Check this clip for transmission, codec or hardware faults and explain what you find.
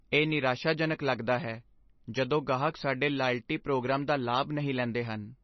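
One codec fault runs through the whole clip. Nothing is heard above 5.9 kHz, and the speech sounds dull, watery and swirly. The likely cause is heavy MP3 compression. Short of bits, the encoder cut the treble and dropped weak frequency lines, which flicker between frames. The damage fits a bitrate near 26 kbps.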